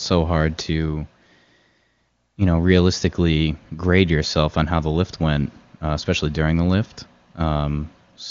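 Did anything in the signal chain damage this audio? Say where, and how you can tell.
No, nothing in this speech stood out on listening as damage from any stage of the chain.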